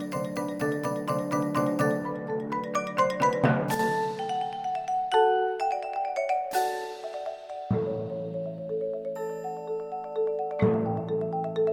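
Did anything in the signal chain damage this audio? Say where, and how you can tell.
Yes. One channel drops out from 3.74 to 3.79 s, a 50 ms gap. The level dips abruptly by about 6 dB, then recovers. That fits one stereo side vanishing before the mono sum. The likely stage is analogue wiring, such as an intermittent cable or connector contact.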